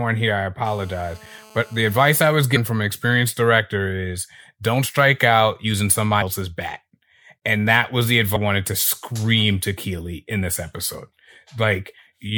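From 0.65 to 2.20 s, a GSM phone buzz sits under the speech. It is a hard, raspy tone at 217 Hz, thick with harmonics, about 27 dB below the speech. A 2G handset nearby is in a call, sending radio bursts 217 times a second. The audio circuit rectifies those pulses into sound. Because the phone is in a call, the buzz holds steady until it stops. It has nothing to do with what is being said.

Compressed frames are skipped three times, at 2.55, 6.21 and 8.35 s. Each time, whole frames of the encoded stream never play, either missing from the file or rejected by the decoder as damaged. The speech jumps forward. The first two jumps lose about 200 ms, the third about 300 ms. These gaps are whole multiples of a 26.1 ms frame. Overlapping frames blur each join into a short smeared blip, not a sharp click.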